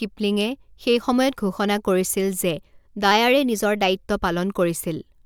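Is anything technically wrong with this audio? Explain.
Yes. From 3.11 to 3.95 s the speech speeds up 5.4% and rises 91 cents, nearly a semitone, then snaps back. That's likely a drift correction step, where clock-matching software briefly changed the playback rate.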